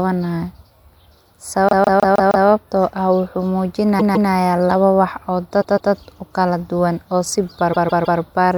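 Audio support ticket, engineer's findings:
Repeated frames, speech stutters four times. The same ~157 ms block loops, which fits a run of six compressed frames resent or rewritten upstream. At 1.69–2.47 s it plays 5 extra times before "ah wuxu", at 3.99–4.30 s twice before "labo wax", at 5.61–5.92 s twice, and at 7.72–8.19 s three times. On the spectrogram, identical blocks sit side by side. The waveform shows copy-pasted envelopes. Total length grows by about 1.9 s.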